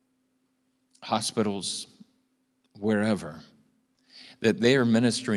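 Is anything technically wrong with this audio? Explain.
Yes. There is a short stall from a late packet at about 3.95 to 4.00 s in this speech clip. One packet was late, and the jitter buffer ran dry. The receiver stretched the last sound by about 20 ms until the packet arrived. Then playback resumed from the same point, so nothing is lost. You hear a sound held slightly too long, with a faint buzz or dip. After this, the audio runs about 20 ms later. The call path's Opus coding is audible as a top end that stops near 12 kHz.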